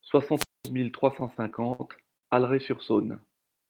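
From 0.35 to 0.69 s there is a wireless microphone squelch dropout. The radio signal fades and hiss rises. Then the receiver's squelch mutes the output for about 222 ms. The speech comes back with "mille trois".

Right after "mille trois", from 1.11 to 1.81 s, repeated stalls cause a stutter. Packets arrive too slowly, and the jitter buffer keeps running dry. The receiver holds the last sound each time, about 138 ms in all and up to 64 ms at once. Nothing is lost, but the speech drags.

At 2.17 to 2.25 s comes a short stall from a late packet. The packet is 58 ms late, and the buffer empties. The receiver stretches the last sound for 58 ms, then resumes where it stopped.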